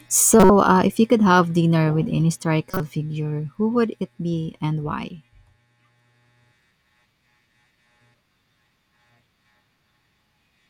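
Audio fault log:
0.40–0.50 s and 2.71–2.80 s, corrupt frame decoded: short glitches, the first peaking near full scale and the second quieter, around -10 dBFS. Each lasts a few compressed frames whose flipped bits the decoder played anyway, putting energy at the wrong frequencies.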